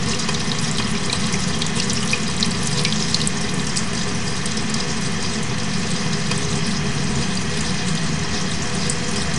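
From start to finish the sound runs slow and sits about seven semitones low: a wrong sample rate, playing at two-thirds speed, which fits 48 kHz audio played back at 32 kHz.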